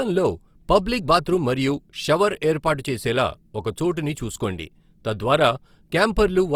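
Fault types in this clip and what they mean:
Opus compression: The speech has a rough, grainy texture throughout, and the damage is plainly audible. The likely cause is a low-rate Opus encode in its music mode, and the sound fits a rate near 24 kbps. That mode keeps each band's overall energy. Short of bits, it fills the finer detail with folded copies of lower bands or with noise. So vowels turn noisy rather than swirly. The bandwidth stays full, reaching 20.2 kHz.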